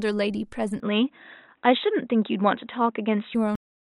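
At 0.8 s the speech suddenly turns dull and boxy, with nothing above 3.8 kHz, a level change of roughly 5 dB and faint new background noise far below it, with no gap at the change. That's likely the input switched to a poorer device, and it holds until 3.35 s. Then there's a cut-off end at 3.56 s: the sound stops mid-syllable and drops straight to digital silence with no decay, because the final buffers never got written out.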